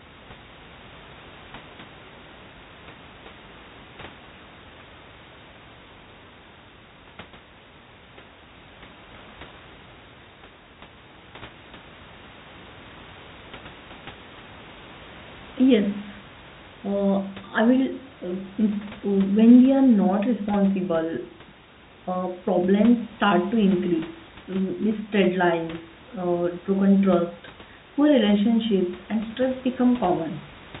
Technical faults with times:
none

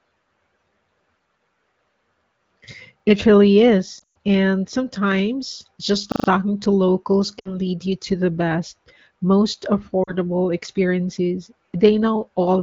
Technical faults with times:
3.00-3.04 repeated buffer
3.99-4.17 lost AMR speech frames
6.12-6.28 repeated buffer
7.39-7.57 lost AMR speech frames
10.03-10.13 lost AMR speech frames

